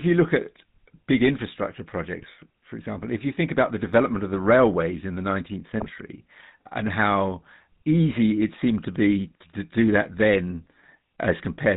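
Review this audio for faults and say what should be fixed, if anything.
GSM full-rate codec damage runs through the whole recording. The buzzy, gravelly roughness fits the 13 kbps full-rate mode. The codec reduces speech to a vocal-tract filter excited by regularly spaced pulses and keeps only every third excitation sample, so fine detail in the voice is replaced by a coarse pulse pattern. Nothing above 4 kHz survives, which leaves the speech dull. The damage is plainly audible. Recording or routing through a wideband path instead of a GSM full-rate leg would prevent it.

GSM bit errors are heard from 2.19 to 2.30 s and again from 5.80 to 5.89 s, where the speech breaks into brief squawks and gargling. Corrupted bits reached the decoder and distorted its filter, pitch and gain values, which bends the spectrum and throws the level around for each affected frame. The first burst sounds like about six damaged frames at a lower error rate. 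The second points to roughly four frames at a noticeably higher error rate. A stronger radio link, or a capture that avoids the weak mobile connection, would prevent these errors.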